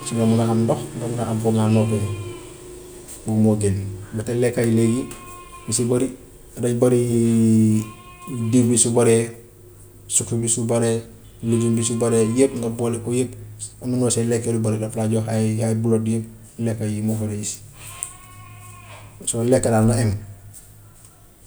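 Nothing stood out on listening to this recording of speech.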